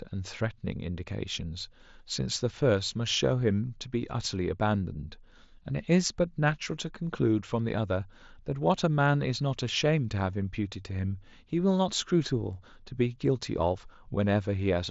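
No technical faults are audible.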